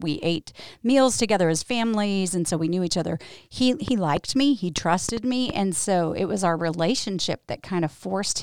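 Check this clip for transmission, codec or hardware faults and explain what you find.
One fault stands out: a train of clicks from 3.88 to 5.51 s. Around seven short pulses of much the same shape arrive at an uneven pace, averaging about 3.1 per second, and peak roughly 10 dB above the speech. The likely cause is electrical interference or a faulty connection or power supply. They sound like sharp ticking laid over the speech. A waveform shows narrow spikes standing above the signal, and a spectrogram shows thin, full-height vertical lines at irregular intervals.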